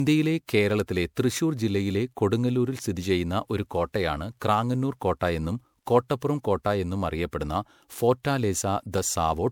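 Throughout the speech, generation loss gives a swirly, hollow, smeared quality, with blurred attacks and nothing above 20.7 kHz. The likely cause is repeated MP3 re-encoding, around seven passes at what sounds like 128 kbit/s, each requantising on a shifted frame grid so artefacts accumulate.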